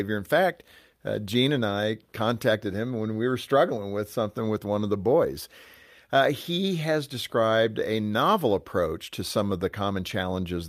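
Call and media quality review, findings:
Slight recurring hiccups and uneven tempo across the whole speech clip. Clock drift between sender and receiver: sender clock runs roughly 1.5% slow, so the jitter buffer keeps draining and the receiver must stretch playback to avoid underruns.

Repeated timing corrections, 0.06 to 10.41 s: playback runs at about 99% speed, with short pieces repeated at irregular intervals, adding roughly 150 ms in total. Receiver-side drift compensation keeps making small same-direction edits to keep pace with the slow sender.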